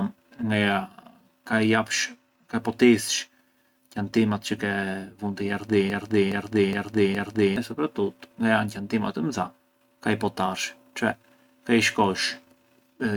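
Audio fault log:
5.9–7.56 s, broken-record loop: right after "çë ke vunë te", a fragment of speech about 0.42 s long is heard four times back to back, each pass identical, before the clip moves on. The likely cause is a stall in the player, encoder or stream that kept resending the last chunk it held. The speech that belonged in those 1.7 seconds is lost, so the sentence jumps ahead when playback resumes.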